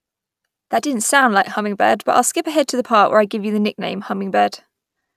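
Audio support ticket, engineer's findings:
No faults found on the speech signal; no dropouts, distortion, timing errors or level anomalies were heard at any point in the recording.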